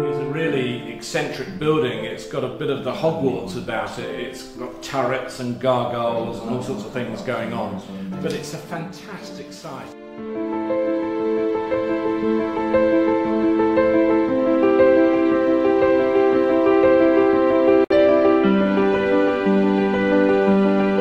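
At 17.84 s, a gap at a join of encoded pieces opens for about 61 ms. Untrimmed encoder delay and padding leave soft-edged silence, then the sound resumes exactly where it stopped, nothing skipped.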